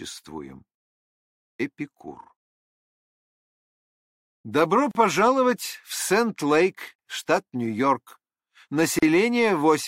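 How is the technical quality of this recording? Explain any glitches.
The recording has one recurring glitch: a gap at a join of encoded pieces, at 4.91–4.95 s, 6.95–6.99 s and 8.99–9.03 s, each about 38 ms and spaced every 2.0 s. Separately encoded segments were joined with their encoder delay and end padding left in, so a short silence opens with smeared edges. Unlike a dropout, the sound resumes exactly where it stopped.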